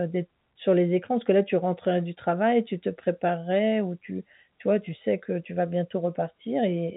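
No technical faults can be heard in the speech, which has the narrow band of G.711 telephone coding, with nothing above about 3.9 kHz.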